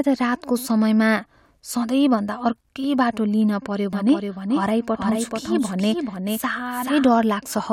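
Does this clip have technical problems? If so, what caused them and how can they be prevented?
Yes. A doubled audio track runs from 3.93 to 7.09 s: a second full-band copy of the speech appears abruptly, trailing the original by roughly 400 ms at a somewhat lower level, with no decay or room colour, then cuts off just as suddenly. The likely cause is the same signal reaching the mix twice, once through a slower capture or monitoring path. To prevent it, route each source through a single path and mute any duplicate return.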